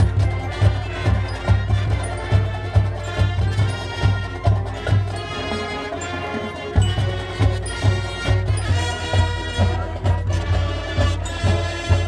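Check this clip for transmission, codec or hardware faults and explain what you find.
One fault is audible: a wrong sample rate over the final stretch of the clip.

From 8.65 s to the end, the playback clock runs slower than the one the audio was captured with, and nothing converts between them. The slowdown fits 48 kHz material played out at 44.1 kHz. Speed and pitch therefore drop together by the same ratio. The sound runs at about 0.92 times its proper speed and sits roughly 1.5 semitones lower, so it comes across slightly lower and slower.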